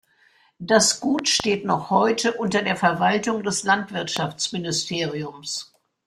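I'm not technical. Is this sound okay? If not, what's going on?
No. There are loud pops, sharp thumps laid over the speech, as a double pop from 1.19 to 1.42 s just before "noch heute unter der" and a single one at 4.17 to 4.19 s. Unlike a dropout, the speech carries on underneath. The likely cause is an electrical jolt such as a plug, switch or static.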